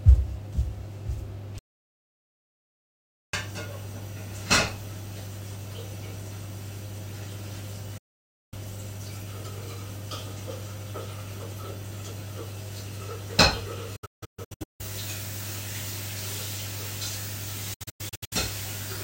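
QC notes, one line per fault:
1.59–3.33 s, audio dropout to silence: sound cuts to dead silence for about 1.7 s with no room tone, likely a lost input writing zeros. The waveform is a flat line and the spectrogram is a blank vertical band.
7.98–8.54 s, 13.96–14.81 s, 17.74–18.33 s, digital broadcast dropout: the receiver mutes on failed frames with 8 ms fades. There is one solid 0.54 s hole, then clusters of short holes. The spectrogram shows blank slices, whose lengths fit 32 ms frames.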